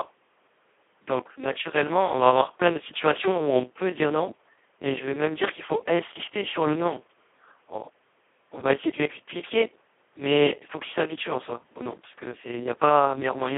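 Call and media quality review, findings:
Speex codec, throughout: heavy hoarse, robotic speech, band 250 Hz to 3.4 kHz, empty above 3.7 kHz on spectrogram; smeared harmonics suggest near-vocoder CELP at roughly 2 kbps.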